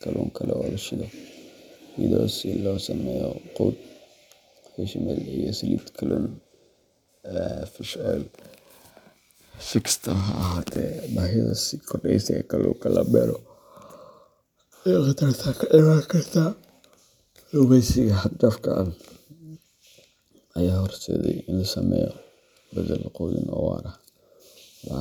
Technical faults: periodic clock jitter

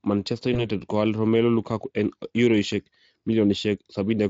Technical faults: VoIP packet loss concealed by the speech codec

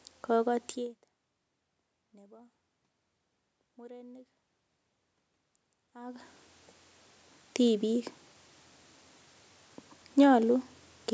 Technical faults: none

